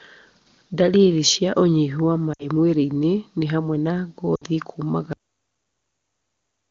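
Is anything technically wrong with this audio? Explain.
Yes, there are two kinds of fault.

At 2.33 to 2.48 s and again at 4.35 to 4.44 s the speech briefly drops to near silence before recovering weak or rough for a moment. These are lost AMR speech frames: about 60 ms of frames failed their checksum, so the decoder repeated the last good pitch and vocal tract settings with dropping gain.

At 5.13 s the speech stops dead mid-sound, falling straight to digital silence with no natural decay until the clip's end. This is a cut-off end: the final buffers were never written or played out. Before that point, the clear HD Voice bandwidth fits AMR-WB running at a high rate.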